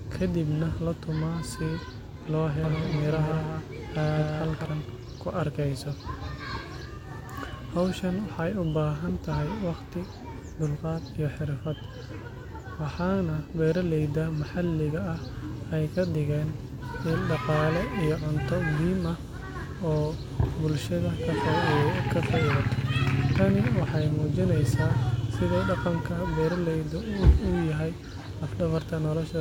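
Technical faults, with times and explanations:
2.64–4.66 s, doubled audio track: a dry second copy of the speech trails by about 200 ms at roughly 5 dB lower, likely from a slower second capture path.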